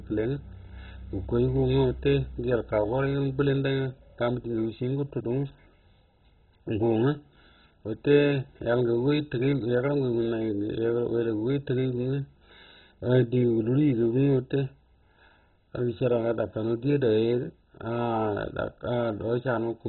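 Throughout, the speech sounds dull and gurgling, with nothing above 4.1 kHz. Heavy MP2 compression at a very low bitrate is the likely cause, starving and switching off upper sub-bands.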